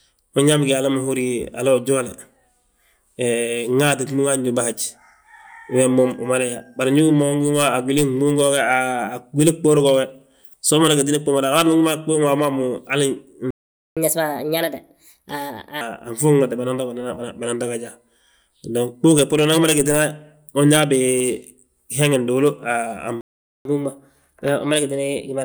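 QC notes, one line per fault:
13.51–13.97 s and 23.21–23.65 s, playback stall: the speech cuts out mid-flow for about 0.46 s and 0.44 s, most likely because the player ran dry of buffered data or was blocked. The waveform shows a flat line and the spectrogram a blank vertical band, with speech resuming abruptly.
13.97–15.81 s and 23.65–25.45 s, catch-up at higher speed: after each gap the backlog is resampled faster, at 1.25x and then 1.1x. Pitch rises about four semitones and about one and a half semitones. Spectrogram harmonics sit visibly higher and syllables compress horizontally.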